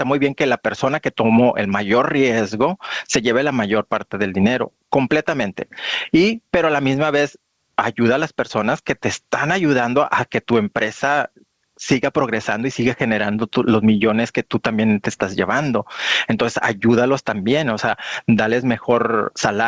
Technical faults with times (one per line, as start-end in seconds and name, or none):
0.00-19.67 gain pumping